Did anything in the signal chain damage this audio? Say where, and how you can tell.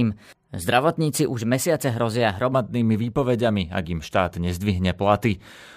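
Yes: a section at the wrong speed, likely from a playback clock mismatch, runs 1.12 times fast from 0 to 2.52 s, raising the speech roughly two semitones until "výpovediami ak im štát".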